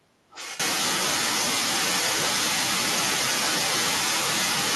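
From 0.30 to 0.58 s there's an echo leak: a quieter copy of the speech arriving 1.14 s late, likely an echo canceller letting loudspeaker pickup through.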